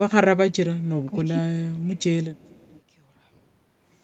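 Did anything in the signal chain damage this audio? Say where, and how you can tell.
Yes, call processing damaged it. From 1.05 to 1.16 s the speech dips by roughly 10 dB for about a tenth of a second. This is speech suppressed in double talk. The echo canceller likely mistook the overlap for echo and attenuated the talker.

There is also echo leak at 1.96 to 2.03 s and 2.35 to 2.81 s. A faint delayed copy of the speech returns 437 ms late, roughly 30 dB below it. The far end's echo canceller likely failed to remove its loudspeaker pickup.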